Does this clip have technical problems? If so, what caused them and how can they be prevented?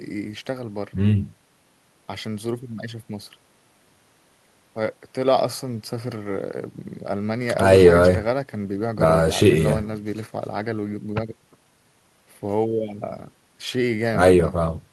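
No, nothing in this speech recording stood out as a technical problem on listening, so there is no cause to trace and nothing to prevent.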